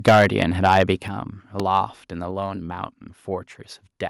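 Right from 0.07 s to 0.83 s the speech hits microphone overload: peaks run about 9 dB past the converter's ceiling, so a few percent of the samples get their tops sliced flat. It gives the louder syllables a harsh, crackly edge, likely from the input gain being set too high.

Inside that stretch, at 0.09 s, the microphone volume gets stepped down by about 2 dB, then again at 1.08 s by a bigger 7 dB. Speech and background both drop together in a sudden step, the likely cause being the call software reacting to the clipping by turning the device input down.

Then from 1.60 s to 1.62 s there's a single loud pop, about 15 dB above the speech, a sharp thump sitting on top while the audio keeps going underneath, likely a voltage spike from a plug, switch, static or driver glitch.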